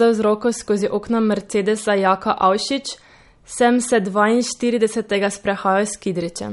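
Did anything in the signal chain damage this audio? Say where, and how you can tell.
Yes. MP3 compression damage runs throughout, at the codec stage: the speech has nothing above 11.2 kHz and a plainly audible watery swirl, likely from a starved MP3 encoder, which fits a low bitrate around 48 kbps, cutting the treble and switching weak frequency lines on and off between frames.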